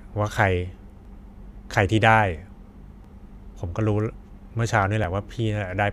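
Audio missing between chunks occurs at 1.05 s, 3.04 s and 5.04 s, a regular two-second spacing. At each point the speech jumps forward abruptly, skipping a sliver of sound only a few milliseconds long, with the material on either side butted together and no gap of silence between. The cause is likely a recorder or processor handling the audio in two-second blocks and dropping a brief piece each time it closes one block and starts the next.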